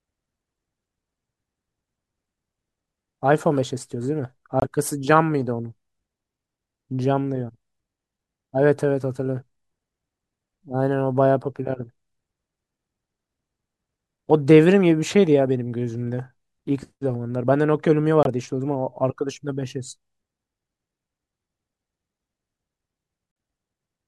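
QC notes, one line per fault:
4.60–4.64 s, 18.23–18.27 s, 23.32–23.36 s: Bluetooth dropout. The speech cuts to brief silence, about 23 ms, 23 ms, then 46 ms. Edges are abrupt or fade over a few milliseconds. The sound resumes further on, as if it kept playing. This is likely late wireless packets, one or two lost frames each.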